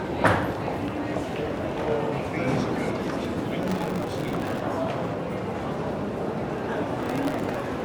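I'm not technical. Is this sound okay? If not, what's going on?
No. Processor overload crackle occurs from 3.63 to 4.60 s and again from 6.95 to 7.60 s. The computer fell behind on its tiny audio chunks, each under a millisecond, leaving many brief silent gaps that sound like gritty crackling.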